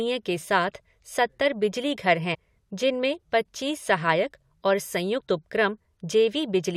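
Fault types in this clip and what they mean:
Clock slip clicks: Two converters likely run on unsynchronised clocks, off by around 30 ppm, so a single sample is dropped or repeated each time the drift reaches a whole sample. The speech carries faint regular ticks about every 0.7 s, around ten between 0.28 and 6.19 s.
Compressed frames skipped: The decoder never played some 21.3 ms frames of compressed audio, so playback jumps forward. At 2.33 s roughly four frames, about 100 ms, vanish. At 5.19 s about two frames, roughly 40 ms, go.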